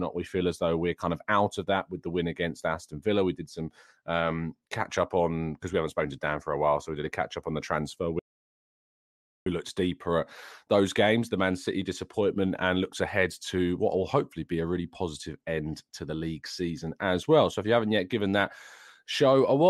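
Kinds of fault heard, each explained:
Audio dropout to silence: the speech cuts off abruptly just after "up on the transfer" at 8.19 s and returns mid-flow at 9.46 s with "looked deeper at those", leaving about 1.27 s of silence with no room tone or background beneath it. Whatever was said in that stretch is simply gone. The likely cause is the input being lost briefly, through a disconnected device, failed link or accidental mute, while recording carried on writing zeros.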